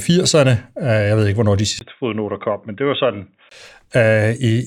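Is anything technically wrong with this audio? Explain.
Yes. From 1.79 to 3.51 s the speech turns dull, cut above 3.8 kHz, quieter and with a different background noise. The input likely switched to a poorer device.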